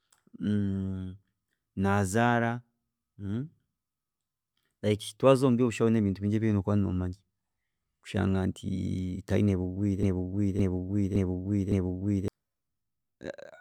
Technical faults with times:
10.03-12.28 broken-record loop

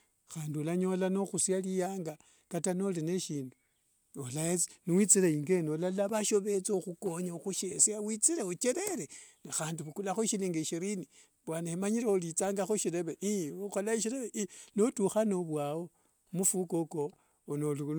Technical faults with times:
none

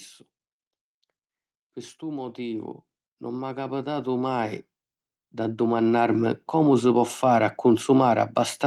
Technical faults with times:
1.99-4.59 automatic gain rising
5.19-7.21 automatic gain rising

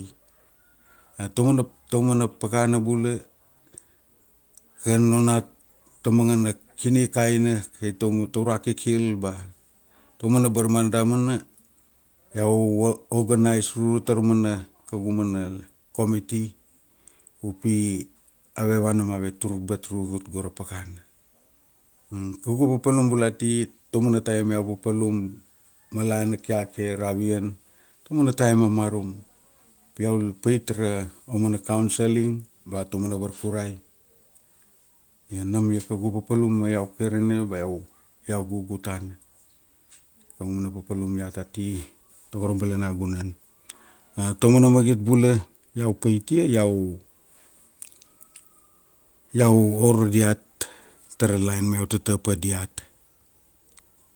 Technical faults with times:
none

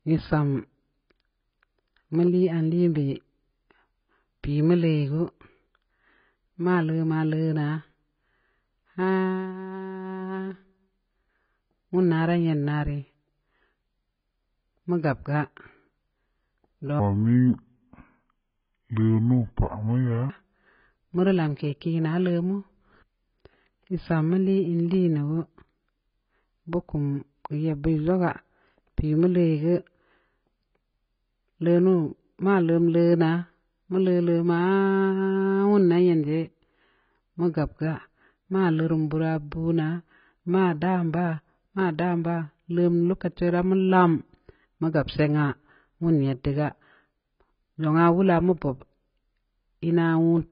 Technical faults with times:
0.00-50.52 AAC compression
16.99-20.30 section at the wrong speed

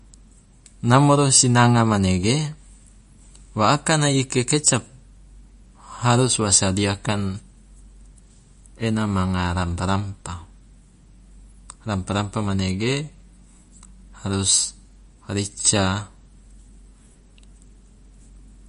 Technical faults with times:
0.00-18.68 MP3 compression

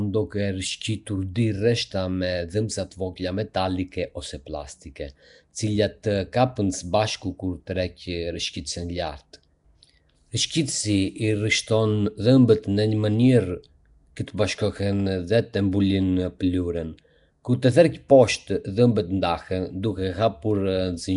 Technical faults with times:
0.00-21.16 Nellymoser compression

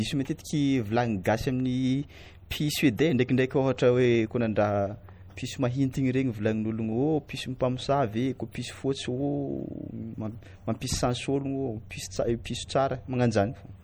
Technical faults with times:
0.00-13.83 MP3 compression

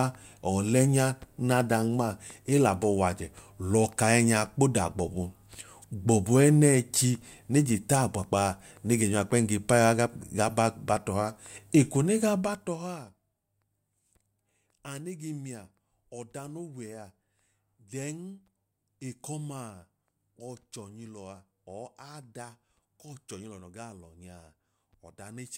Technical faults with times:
none

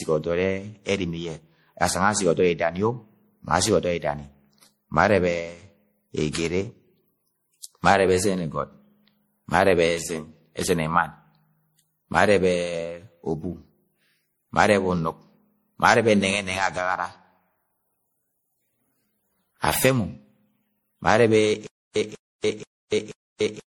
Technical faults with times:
0.00-23.77 generation loss
21.67-23.77 stutter with silent gaps

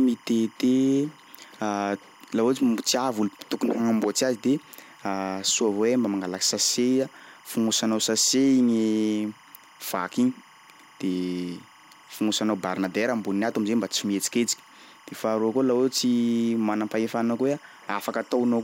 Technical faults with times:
0.00-18.64 timecode bleed

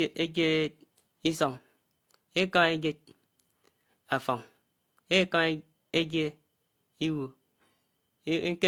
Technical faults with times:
0.00-8.68 transcoding between lossy codecs

